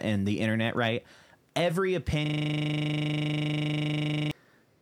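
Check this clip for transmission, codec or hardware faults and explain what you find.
One hardware fault is present in this speech clip. From 2.26 to 4.31 s, a steady 25 Hz buzz replaces the speech: a system hang loop, where a frozen driver left the hardware replaying a 40 ms buffer about fifty times.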